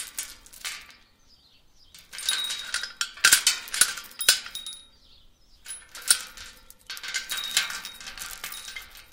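Hard clipping hits this sound three times. From 3.25 to 3.82 s, peaks overdrive a stage by about 14 dB and are cut flat, giving harsh fuzz. Brief flattened peaks at 4.29 s (about 10 dB) and 6.11 s (about 9 dB) crackle.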